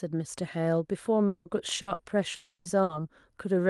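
A long network dropout at 1.27 to 1.48 s likely caused the speech to stop arriving. The receiver stretches the last sound across about 180 ms as a fading buzz or hiss, and the speech picks up further on with that stretch missing.

A burst of packet loss follows at 1.81 to 1.90 s and again at 1.93 to 2.02 s. Each time, about 60 ms of speech was lost or came too late. The gap is bridged by a held buzz or hiss that weakens before the speech resumes past the hole.

A second long network dropout, likely from the same cause, runs from 2.35 to 2.68 s. About 300 ms of speech is gone. The concealment tone fades over most of it and ends in a brief stretch of near-silence, about 40 ms, before the audio returns.

One more burst of packet loss at 2.83 to 2.92 s again replaces about 60 ms with a decaying buzz or hiss. All of this passes through an Opus call path whose high end stops near 12 kHz.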